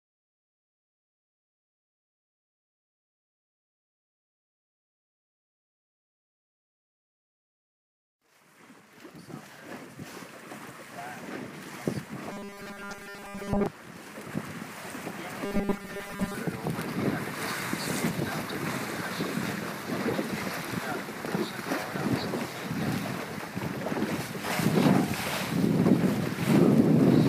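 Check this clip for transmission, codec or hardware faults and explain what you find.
Two stretches of robotic sound from repeated short buffers appear, from 12.32 to 13.66 s and from 15.45 to 16.34 s. In both, the sound becomes a rigid, metallic buzz fixed at 200 Hz. That pitch fits a 5 ms block being played over and over. The likely cause is new audio arriving too seldom, so the playback fills gaps by looping the last short buffer. Most of the real audio in those spans is skipped. Only a rough outline survives under the buzz.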